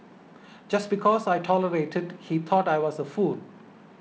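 No technical faults can be heard in this speech recording, which carries the sound of G.722 wideband telephone coding, with speech clear up to about 7 kHz, a light hiss in the upper band and a slightly grainier lower band that points to the 48 kbit/s mode.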